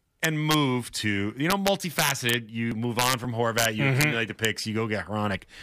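Violent cracks burst from the loud speech peaks at 0.24–0.54 s (just before "to you"), 1.50–2.34 s (right after "to you", the worst, overdriven about 5 dB), 2.99–3.13 s, 3.58–3.65 s, 4.01–4.04 s and 4.45 s. This is integer overflow: instead of being limited, peaks exceeding full scale by about 1–5 dB wrapped around to the opposite sign.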